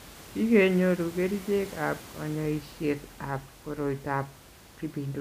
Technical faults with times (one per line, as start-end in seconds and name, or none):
none